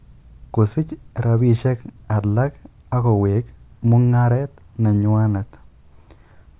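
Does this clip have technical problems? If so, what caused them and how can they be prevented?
No, nothing in this speech recording stood out as a technical problem on listening, so there is nothing here to trace back or guard against.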